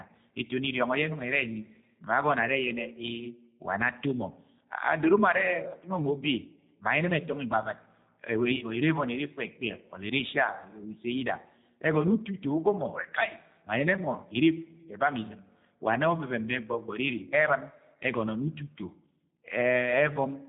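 From start to finish, the speech carries G.729 codec damage. Nothing above 4 kHz survives. The model-rebuilt voice sounds rough and synthetic, which fits an 8 kbit/s VoIP stream.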